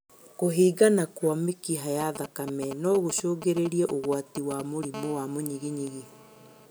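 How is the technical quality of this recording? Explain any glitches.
Two kinds of mobile phone interference mar the speech. From 2.01 to 4.85 s, GSM signalling bursts break in. A nearby 2G phone's radio pulses are rectified, giving galloping ticks and short 217 Hz buzzes, roughly 10 dB below the speech. From 4.94 to 6.66 s, a steady GSM phone buzz follows as the call begins. Continuous 217 Hz radio bursts become a hard, raspy buzz, about 20 dB below the speech.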